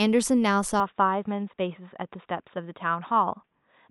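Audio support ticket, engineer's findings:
Input likely switched to a poorer device at 0.8 s, no gap. Speech capped at 3.8 kHz thereafter: duller, boxier, same level, faint noise floor.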